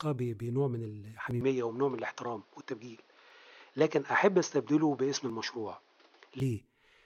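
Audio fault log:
1.31 s, 3.30 s, 5.30 s: audio missing between chunks. Three tiny skips land exactly 2.0 s apart, each dropping only a few milliseconds before the speech on either side is butted together. The even spacing points to audio likely being handled in 2-second blocks, with a sliver lost at each handover. On the waveform each shows as a sudden discontinuity. On a spectrogram it is a thin vertical line of broadband energy at each point.
1.41 s to 6.40 s: input switched to a poorer device. The sound turns duller with no silence at the change, because everything above 6.5 kHz is gone. The level also shifts by a few dB, and a faint new noise floor sits well below the speech. This fits the recording likely having moved to a lower-quality microphone or headset path. A spectrogram shows a sharp ceiling at 6.5 kHz across this stretch, and the waveform envelope steps at both ends.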